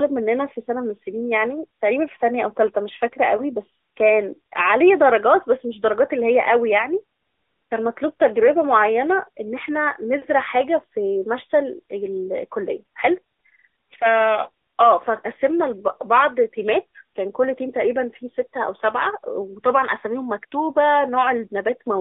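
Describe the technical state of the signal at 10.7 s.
At 10.7 s the speech is carrying AMR narrowband mobile codec damage, as it does for the whole clip. Everything is squeezed into a telephone band of about 300 Hz to 3.5 kHz. The voice is rebuilt from a vocal-tract model fed sparse pulses, giving a plainly buzzy, synthetic edge consistent with an upper-rate mode near 10.2 kbps. On a spectrogram, energy stops sharply at 3.5 kHz, with an empty floor below 300 Hz.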